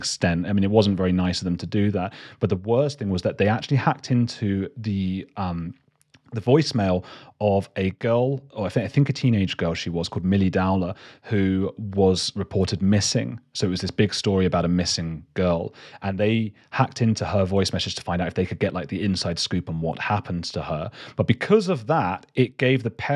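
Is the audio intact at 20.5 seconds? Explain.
Yes, at 20.5 seconds the speech plays through intact, with no dropout, click, distortion or other fault at that moment.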